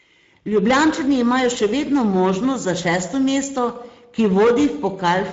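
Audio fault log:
Throughout: Speex codec. The speech has that clearly hoarse, grainy CELP sound, because the codec spends too few bits on the excitation signal and the voice buzz comes back roughened with noise riding on it. The sound points to a mid-range setting around 17 kbps. Nothing gets through above 7.6 kHz, and the top band above 4 kHz isn't real detail. It's a noise-like fill shaped to roughly match.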